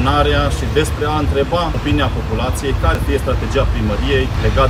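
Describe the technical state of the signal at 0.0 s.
The audio is intact at 0.0 s, with no fault present at that moment.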